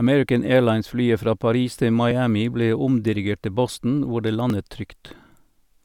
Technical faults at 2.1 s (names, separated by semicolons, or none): dropped buffer (overrun)